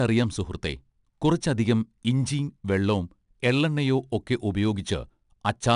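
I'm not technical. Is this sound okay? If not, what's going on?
No. The recording was squeezed with 4-bit ADPCM compression, a cheap older method that stores each moment of sound as a small guessed step from the last one. Those rough guesses leave a gritty hiss that rides along with the speech from start to finish, getting louder whenever the speech does, and the sharp starts of sounds come out rough. Nothing above 10.6 kHz survives either, so the top end sounds dull.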